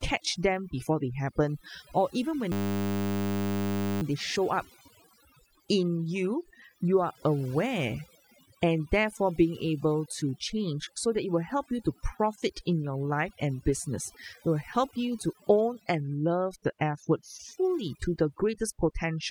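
Overdone noise removal runs through the whole speech clip: an aggressive noise reducer has cut bands near its noise estimate, leaving speech over near-silent background with twinkling specks. A system hang loop hits from 2.52 to 4.02 s, after "they happen or even" and before "they show up": a stalled system kept replaying one 10 ms buffer, producing a steady buzz at 100 Hz.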